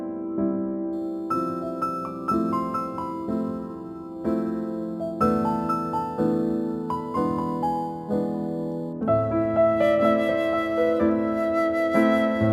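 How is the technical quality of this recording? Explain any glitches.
The recording has one fault, a crude rate conversion running from 0.93 s to 8.93 s. Over that stretch the sample rate was changed by copying the nearest existing sample instead of filtering, which fits a 44.1 kHz to 48 kHz conversion where some samples get repeated. The repeat pattern creates shifted, inharmonic copies of the sound, roughly 30 dB below the signal, heard as a gritty, inharmonic fizz that follows loud and high content.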